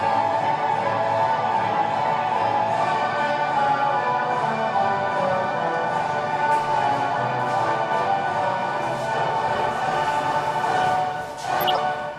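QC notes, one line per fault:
11.60–11.78 s, corrupt frame decoded: a run of damaged frames got played anyway, so energy lands at wrong frequencies, a chirp, squeak, blip or noise burst peaking around -10 dBFS.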